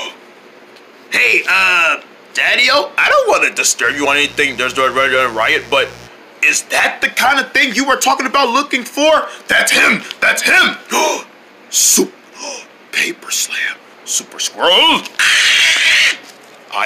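Hard clipping runs through the whole of the audio: the signal is driven about 3 dB past what one stage can pass, so a small share of its peaks are sliced flat, and those squared-off tops throw harmonics high up the spectrum, heard as crackle on the loudest moments. Mains buzz appears from 3.82 to 6.10 s, a steady raspy tone built on 60 Hz harmonics reaching into the kilohertz range, sitting well below the signal, which points to switching spikes from a dimmer, rectifier or unshielded lead getting in twice per mains cycle.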